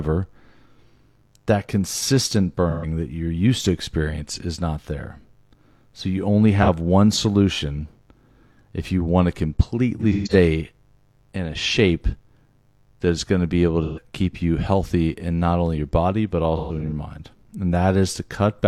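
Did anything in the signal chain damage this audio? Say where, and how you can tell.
Yes. Mains buzz runs throughout: a raspy 50 Hz harmonic buzz about 40 dB below the speech, from switching spikes leaking into the analogue wiring.

AAC frame loss with concealment hits the codec stream at 2.70–2.85, 6.62–6.69, 9.99–10.34, 13.83–14.01 and 16.57–16.92 s. These are smeared, phasey patches where the decoder resynthesised the missing frames from the last good spectrum.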